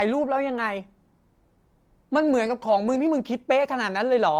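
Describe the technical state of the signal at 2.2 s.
At 2.2 s the signal is intact, with no fault audible at that moment.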